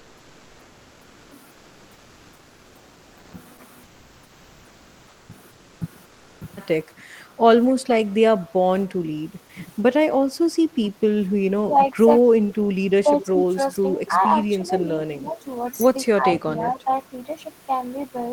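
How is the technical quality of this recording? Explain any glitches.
The recording has three recurring faults, all typical of a call path.

Comfort noise in place of the background appears from 0.0 to 1.31 s, 1.53 to 3.33 s, 3.85 to 5.29 s, 5.53 to 5.81 s and 6.05 to 6.41 s. Discontinuous transmission, likely Opus DTX, stopped sending during pauses, so the receiver generated synthetic noise. The real background becomes a flat, featureless hiss about 1 to 2 dB quieter.

Speech is suppressed in double talk at 6.93 to 7.05 s, 8.08 to 8.32 s, 9.46 to 13.35 s and 16.16 to 16.87 s. With both sides talking, the echo canceller likely mistook this talker for echo and turned it down. The voice dips by roughly 10 to 20 dB, for around 0.7 s in total during the long stretch.

Echo leak occurs at 7.68 to 7.72 s and 13.21 to 14.12 s. A loudspeaker-side echo canceller likely let part of the microphone pickup through, and it was sent back. 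The result is a faint delayed copy of the voice trailing by 243 ms. The first is a brief scrap roughly 35 dB down. The second is a longer stretch roughly 20 dB below the speech.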